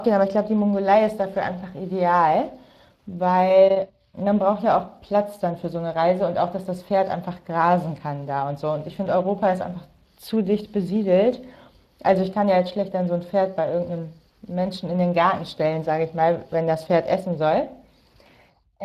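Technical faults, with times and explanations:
Throughout, Speex codec: the speech carries a plainly audible hoarse, grainy roughness, because this CELP coder rebuilds the voice from a short-term filter driven by a coarsely coded excitation, and the excitation errors come through as buzzy noise in the voice itself. The level of damage fits a bitrate around 22 kbps. Unlike the swirly, warbling artefacts of transform codecs such as MP3, the damage here is a rasp bound to the voicing.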